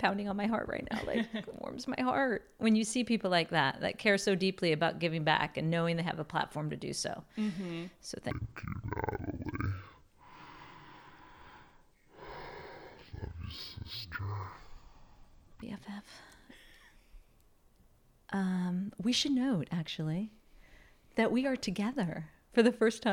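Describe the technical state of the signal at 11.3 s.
At 11.3 s the speech is in a stereo-read-as-mono fault running from 8.31 to 15.62 s. Alternating left and right samples are taken as one channel, so playback runs at 0.5x speed, drops 12 semitones, and a faint mirrored copy appears in the upper spectrum.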